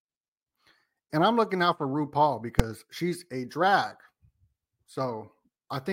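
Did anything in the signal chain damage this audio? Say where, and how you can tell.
Yes. At 2.60 s, just before "she's a drag", a single very loud bang shows invalid numbers at full scale, a processing fault fitting a 128-sample block, pinned flat rather than clipped.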